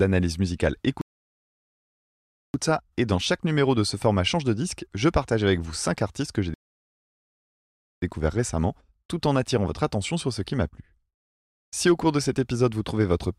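At 1.01 s the speech drops to silence until 2.54 s, then resumes with "ça et dans chaque". This is a rebuffering stall. The player ran dry and waited for data, adding about 1.5 s.

A second rebuffering stall follows "artistes que j'ai" at 6.54 s. Silence lasts until 8.02 s, about 1.5 s. The speech then continues with "récemment tout en attirant", with nothing skipped.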